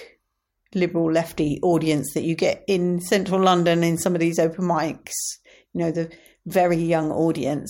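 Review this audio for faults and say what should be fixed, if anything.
Nothing stood out on listening to the speech, so there is nothing here that needs fixing.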